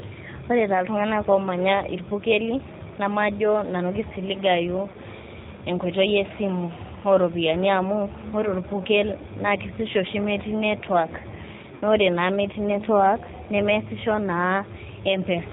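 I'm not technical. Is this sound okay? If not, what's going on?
No, not quite. The whole recording went through the G.729 codec, the phone-call compression that rebuilds a voice from a rough model of the throat and mouth. It throws away everything above 4 kHz, so the speech sounds muffled and a bit rough and robotic throughout. You can still follow it easily, but the damage is plainly audible, like a budget internet phone call.

There are also two brief hiccups from VoIP packet loss concealed by the speech codec. Bits of the call went missing, and the decoder papered over them by stretching out the last sound it had, fading it into a buzzy or noisy smear. The first is at about 4.92 s, right after "irpukeli namajo nanu kisiligayu", a tiny 20 ms gap. The second, at 11.75 to 11.82 s just before "ore naa metii network", is longer at 60 ms.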